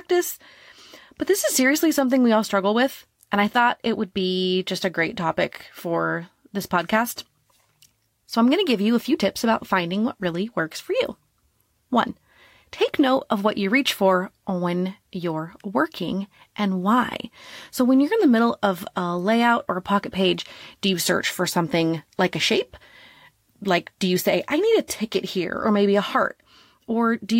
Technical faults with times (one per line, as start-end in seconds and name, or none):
none